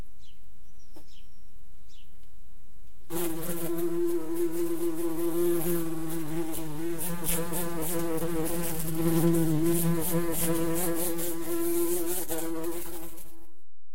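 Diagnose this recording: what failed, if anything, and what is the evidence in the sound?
DC offset runs throughout, a constant shift of about -27 dBFS from the converter or analogue input stage, costing headroom and showing as steady energy at 0 Hz.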